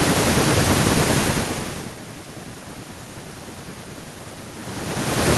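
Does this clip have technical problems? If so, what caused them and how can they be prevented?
No, there are no technical problems in this speech clip, so nothing needs preventing. The room's own background noise is audible, and the level shifts at around 1 s and again near 4.5 s are just the talker moving relative to the microphone.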